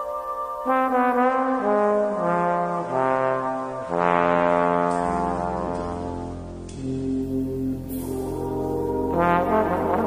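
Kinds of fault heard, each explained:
Adaptive stream at a lower bitrate: from 1.23 to 7.23 s playback switches abruptly, with no gap, to a leaner encoding after the connection slowed. Nothing remains above 9.7 kHz and coding artefacts thicken, which fits a step down from 96 to 32 kbit/s AAC.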